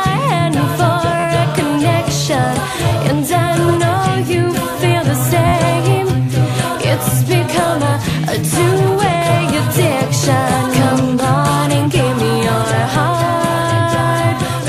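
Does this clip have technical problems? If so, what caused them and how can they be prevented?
Yes, there's a repeated buffer fault at 1.20, 2.89 and 5.48 s. New audio arrived late, so an 11.6 ms chunk, consistent with a 512-sample buffer, replayed with hard joins, as brief buzzy stutters. A larger buffer or higher-priority audio thread prevents this.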